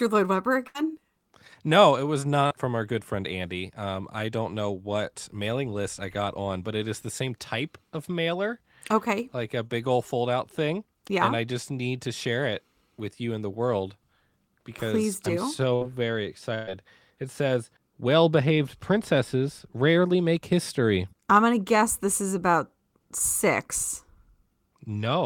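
Speech with two kinds of network damage. A burst of packet loss hits at 0.67–0.76 s, 15.75–15.83 s and 16.55–16.69 s: the decoder stretches the last sound into a fading buzz or hiss, then resumes with roughly 60 to 120 ms gone. Short concealed packet loss at 2.46–2.52 s, between "it was" and "from our good friend", and at 9.66–9.71 s, just before "old fold out thing", leaves a brief smeared patch over a few hundredths of a second of lost audio.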